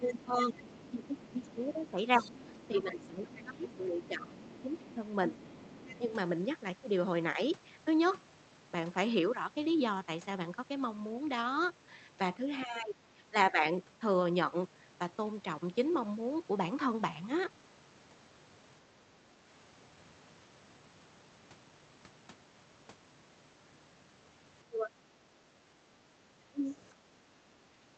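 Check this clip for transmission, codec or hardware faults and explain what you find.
The clip has three echo-control faults, clustered at the start and near the end, with one event in the middle.

Speech suppressed in double talk, 0.0–5.03 s, 5.99–6.1 s, 12.65–13.62 s, 24.68–24.95 s and 26.5–26.72 s. The speech dips in pieces, by around 10 dB early on and by roughly 20–25 dB in the last two events, likely because the echo canceller could not tell the talker from overlapping far-end audio and pulled both down.

Other side's voice leaking through, 0.03–5.98 s. A second voice sits faintly under the speech, roughly 20 dB below it, likely loudspeaker playback that the echo canceller failed to fully remove from the microphone signal.

Background gated by the echo canceller, 25.32–26.21 s and 27.0–27.45 s. The room tone briefly sinks by about 6 dB and then recovers. The canceller clamped the microphone while playback was active and released it afterwards, so the ambience pumps down momentarily.

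The audio's upper limit of about 8 kHz matches an Opus call path at a rate consistent with 32 kbps.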